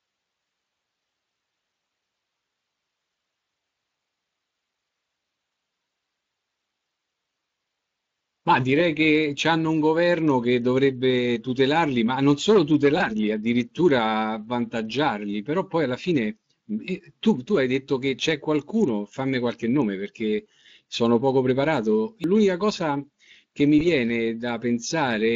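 At 12.98 to 13.02 s, a single 20 ms packet of this speech went missing on the VoIP link, and the Speex decoder, whose light coding haze points to a fairly generous setting, concealed the gap by repeating its last pitch period and spectral shape at falling gain. The result is a brief, fading smear where the voice should continue. Because the decoder's state carries forward, the voice sounds weak for a moment after real packets resume.

At 22.24 s comes a CD skip. The laser lost its track and landed on another turn of the disc's spiral, so the player muted for a very brief instant and resumed from a different point in the recording. It is heard as a small tick followed by an abrupt discontinuity, with the speech jumping out of sequence.

At 23.78 to 23.83 s, another single 20 ms packet was lost and concealed the same way. The decoder extrapolated from its previous frame and faded it out, producing a short blur. 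The voice takes a few tens of milliseconds to recover its normal clarity once packets return.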